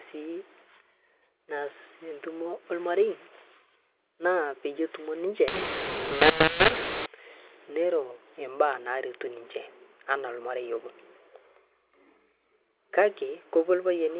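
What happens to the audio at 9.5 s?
Nothing goes wrong at 9.5 s: the speech carries on intact through that moment, with only the narrow, slightly grainy sound of its ordinary mu-law telephone coding.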